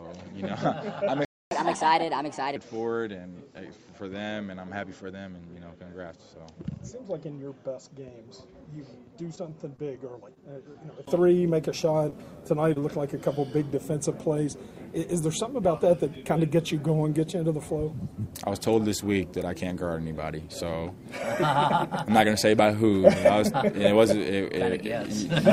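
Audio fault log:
0.00–11.07 s, input switched to a poorer device: The sound is dull and boxy, with a narrower band. It sits about 10 dB lower over a new noise floor roughly 45 dB down. At 11.07 s a 20 ms silence comes, then fuller sound returns, likely from changing back to a better microphone.
1.25–1.51 s, playback stall: The output goes silent for 0.26 s, in mid-flow. It then resumes where it stopped. The player likely ran out of buffered data or was blocked, and had nothing to send out until it recovered.
1.51–2.56 s, catch-up at higher speed: Right after the stall the sound runs 1.25 times fast, pitched up about 4 semitones. The player resamples its backlog to win back the lost time. Then speed and pitch fall back to normal.
9.35–9.80 s, repeated packet loss (robotic sound): Four short holes, the longest 17 ms, fall close together. Each is patched by extending the last sound, covering about 11% of the span. 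The repeated patching makes the stretch choppy, with small pieces missing.
10.34, 10.72, 12.10, 12.74 and 12.80 s, short concealed packet loss: At each time, 20 ms of audio is missing. The receiver bridges it by continuing the previous sound, then blends back into the real signal. Each one is heard as a brief smear or wobble.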